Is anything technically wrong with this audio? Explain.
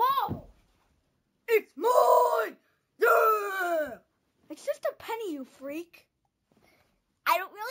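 Yes, there's imaging from sample-and-hold upsampling running through the whole clip. The audio went from 16 kHz to 48 kHz by just repeating samples with no smoothing filter, so a mirrored copy of the spectrum sits in the 8 to 16 kHz band, about 20 dB down. You hear it as a bright metallic fizz that rises and falls with the sound, and it moves the opposite way whenever pitch changes.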